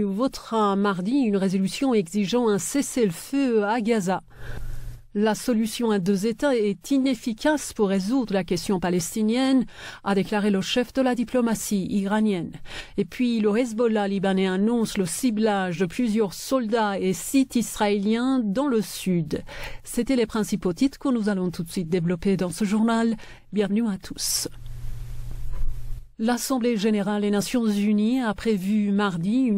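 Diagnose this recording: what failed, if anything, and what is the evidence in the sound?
A corrupt frame was decoded at the codec stage. At 15.77 to 15.82 s there is a short glitch lasting about 50 ms. It peaks around -25 dBFS. Its length fits a single damaged frame. Flipped bits in that compressed frame were not caught, so the decoder played it anyway. The misread gains and codes put energy at frequencies that do not belong to the surrounding sound.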